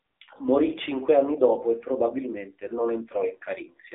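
Throughout, the speech carries AMR narrowband mobile codec damage: nothing passes above 3.8 kHz, and the coarse vocal-tract coding sounds buzzy and synthetic, consistent with a 7.4 kbps mode.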